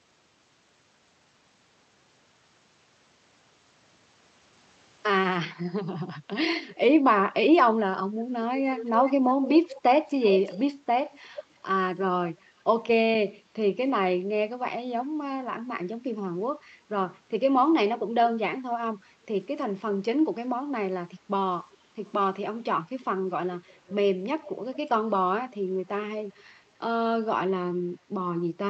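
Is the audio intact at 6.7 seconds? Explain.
No. From 6.68 to 6.75 s there is an echo leak: a faint copy of the speech arriving 349 ms late, roughly 25 dB down, likely residue a far-end echo canceller missed. Unlike reverb, it is a distinct delayed repeat, not a smeared tail.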